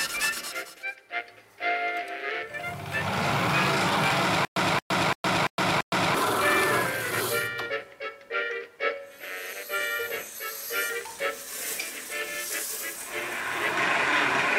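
Stutter with silent gaps, 4.45 to 6.15 s: a 226 ms burst repeats five times, each followed by 114 ms of silence, likely from playback stalling and replaying its last fragment.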